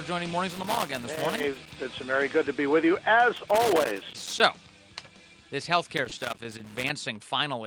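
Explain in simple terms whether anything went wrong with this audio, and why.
A cable or plug with a worn or dirty contact was moving, so the connection kept cutting in and out many times a second. That chops the sound into fragments, and any DC on the line adds pops, which is loose connector crackle. It comes in three irregular bursts of scratching and crackling, from 0.51 to 1.75 s, from 3.37 to 4.40 s, and again from 5.97 to 6.90 s, each lasting about a second.

Early in that last burst, at about 6.1 s, a tiny slice of the transmission, roughly 20 ms, never arrived in time. The receiving end covered the gap by stretching out the sound just before it for about the same length and then blending back into the real audio. This is short concealed packet loss, heard as a quick smear or wobble.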